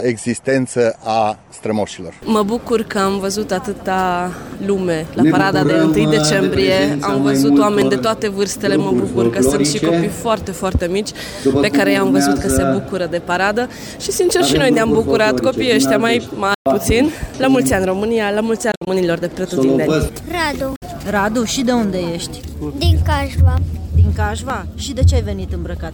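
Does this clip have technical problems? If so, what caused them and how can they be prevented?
Yes. Bluetooth dropouts, likely from audio packets reaching the headphones too late and being discarded, cut the sound to silence at 16.54–16.66 s, 18.72–18.87 s (scattered gaps, longest 56 ms) and 20.76–20.82 s. Each time, the sound resumes as if it had kept playing. Keeping the source device close, with a clear line of sight and less 2.4 GHz interference, prevents this.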